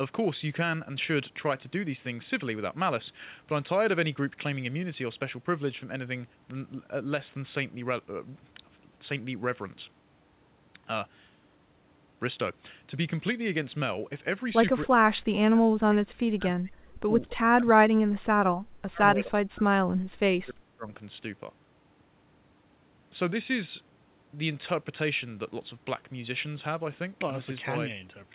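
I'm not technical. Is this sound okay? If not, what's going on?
No. This is likely speech suppressed in double talk: the call's echo canceller mistook the talker for the other side's echo and turned everything down. The voice dips or cuts out from 14.87 to 17.11 s, briefly at 17.30 to 17.39 s, and again from 17.56 to 20.92 s.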